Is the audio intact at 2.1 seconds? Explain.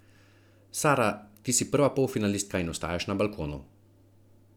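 Yes, the speech at 2.1 seconds plays through intact, with no dropout, click, distortion or other technical fault at that moment.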